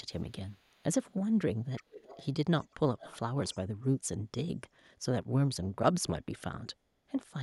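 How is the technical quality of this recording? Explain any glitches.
The speech has echo leak in five short bursts. Echo leak at 0.21–0.83 s, 1.76–2.28 s, 2.61–2.74 s, 2.98–3.18 s and 3.47–3.58 s: a delayed copy of the voice trails about 370 ms behind. It is barely audible at first and clearest around 1.8 and 3.0 s, likely from an echo canceller at the far end not fully removing loudspeaker pickup.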